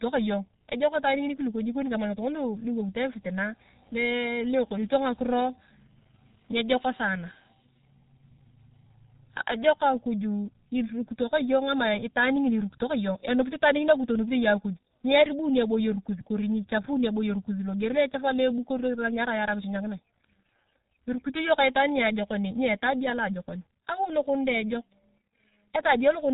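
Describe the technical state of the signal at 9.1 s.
At 9.1 s the speech carries channel delay (comb filtering), present through the whole clip. One channel trails the other by roughly a millisecond and a half, and summing them to mono cancels shared content at evenly spaced frequencies, the first near 400 Hz. The result is a hollow, phasey tone. Unlike a plain treble loss, it has regularly repeating notches that stay fixed however the speech moves.

The same moment also bears the marks of the G.723.1 codec, again throughout. Nothing passes above 3.8 kHz, and the heavy coding damage fits a rate near 6 kbit/s. The coarse frames and slowly updated voice model leave the speech muffled and hoarse, with smeared consonants. A simple low-pass filter would dull the sound without roughening it this way.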